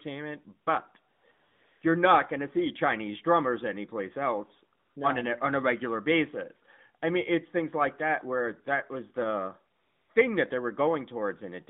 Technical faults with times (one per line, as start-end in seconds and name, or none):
1.14-1.82 AMR comfort noise
4.78-4.96 AMR comfort noise
9.76-10.10 AMR comfort noise